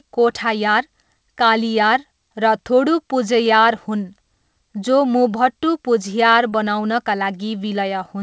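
At 6.50 to 6.54 s, about 20 ms of the call's audio failed to reach the decoder in time, a short concealed packet loss. The receiver covered the gap by extending the preceding speech for roughly 19 ms, carrying its pitch forward or filling with shaped noise, and then crossfaded back into the real signal. The result is a brief smear or wobble in the speech, where a short consonant could drop out. Across the clip, the call path passes nothing above 8 kHz, which fits a G.722 codec.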